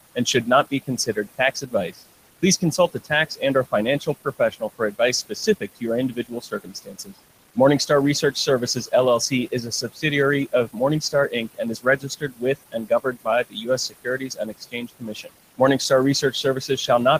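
Noise suppressor artifacts run through the whole clip. The suppressor lowers frequency bands it judges to be steady noise by about 19 dB, frame by frame. The room noise, which sits about 16 dB below the speech, sinks in pauses and rises under words. On a spectrogram the noise floor looks patchy and blotchy.

Speech cut by the noise suppressor comes first just after "and should not", at 0.71 to 2.02 s, then at 2.42 to 7.14 s, 8.22 to 8.93 s, 9.29 to 10.04 s and 10.52 to 16.89 s. There, quiet parts of the speech were taken for noise and turned down by up to about 21 dB, so soft consonants and endings sound swallowed. Within the last span, the losses add up to roughly two seconds. The waveform shows sudden notches in the speech envelope, and the spectrogram shows missing low-energy detail.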